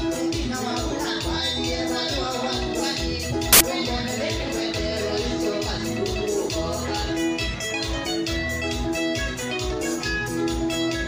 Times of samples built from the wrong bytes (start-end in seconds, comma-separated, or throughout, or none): 3.53-3.61